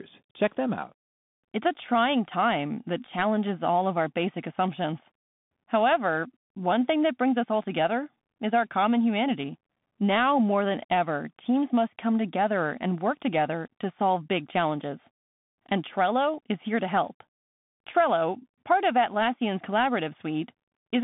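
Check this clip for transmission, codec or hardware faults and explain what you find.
One fault runs through the whole clip: the speech has passed through a Bluetooth CVSD headset codec. The line band sits at roughly 150 Hz to 3.6 kHz, with nothing above 3.8 kHz. CVSD encodes one bit per sample, up or down, with an adaptive step, which fits a 64 kbps link. The codec damage is plainly audible: loud high-frequency energy outruns the step and distorts, s sounds turn scratchy, and a granular hiss lies beneath the speech.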